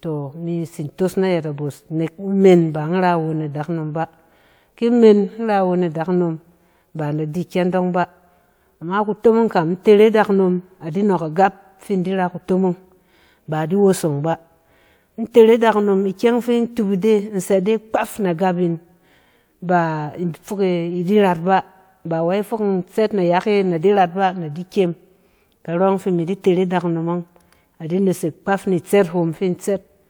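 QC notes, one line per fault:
No technical faults are audible anywhere in the speech recording.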